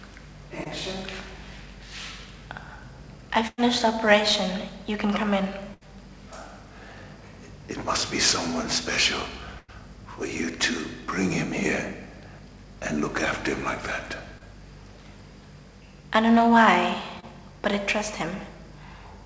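At 0.64 to 0.67 s there is a short concealed packet loss. About 20 ms of audio never arrived in time. The receiver filled the hole by extending the last sound, then blended back into the real signal. It is heard as a brief smear or wobble. The same thing happens at 14.38 to 14.42 s and at 17.20 to 17.25 s. Each gap is again about 20 ms.

At 3.47 to 3.60 s comes a burst of packet loss. About 100 ms of audio is gone. The receiver extends the last sound and lets it fade out. It then drops to silence for about 30 ms before the audio resumes further on. A second burst follows at 5.74 to 5.83 s, with about 80 ms missing. A third comes at 9.59 to 9.70 s, with about 100 ms missing. Each one sounds like a held buzz or fading hiss that jumps ahead. The call codec passes nothing above 8 kHz, which fits G.722 at 64 kbps.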